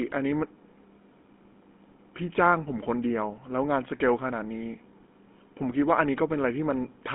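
Throughout, GSM full-rate codec coding gives the speech a plainly buzzy, gravelly roughness from its sparse pulse excitation, band-limited to roughly 200 Hz to 3.5 kHz.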